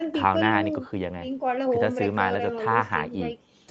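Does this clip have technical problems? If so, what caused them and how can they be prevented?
No, the speech carries the ordinary marks of a call connection, with the microphone processing trimming the deepest bass and the Opus codec limiting the top end to about 8 kHz, and nothing in it calls for prevention.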